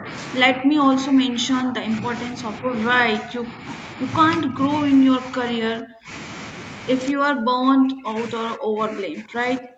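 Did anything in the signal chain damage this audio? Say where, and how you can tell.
Yes, in the call processing stage. The speech keeps getting ducked: 0.0 to 0.08 s, 0.44 to 2.73 s, 3.15 to 3.66 s, 4.43 to 4.61 s, 5.19 to 6.1 s, and from 7.13 s to the end. The dips run from about 10 dB up to about 40 dB, and the last two come close to cutting out. That's likely speech suppressed in double talk: the echo canceller couldn't separate this talker from the far-end echo, so it pulled both down together.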